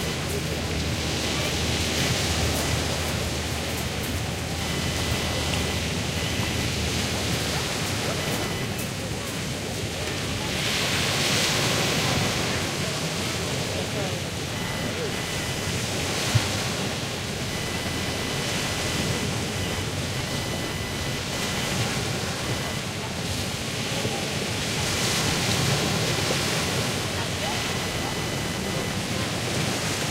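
Computer activity noise runs throughout. Processor or graphics load disturbs the shared ground, adding a buzz near 1 kHz, only about 10 dB below the sound.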